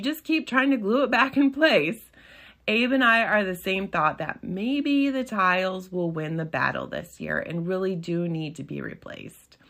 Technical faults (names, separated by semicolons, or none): none